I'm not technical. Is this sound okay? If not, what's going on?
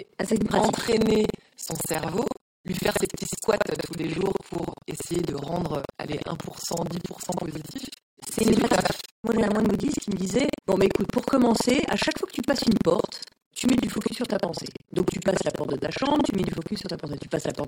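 No. The speech has buffer tearing from start to finish: a steady robotic rattle at about 21.5 times per second, which fits a 2048-sample buffer. The part that plays the audio and the part that prepares it have drifted out of step, so roughly a third of each small chunk holds sound from about a tenth of a second earlier, joined on with hard edges. Unlike mains hum, the rattle stops in pauses and is heard only while someone is talking.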